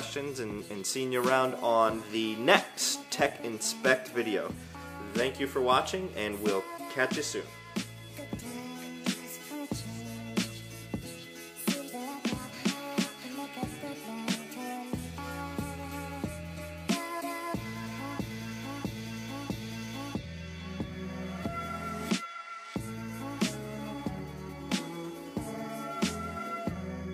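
No dropouts, glitches, distortion or timing faults are audible anywhere in the recording.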